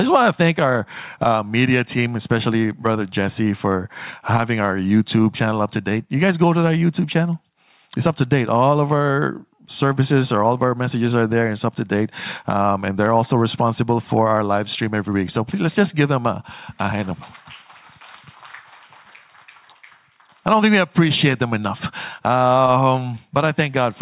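Nothing stood out on listening to this audio.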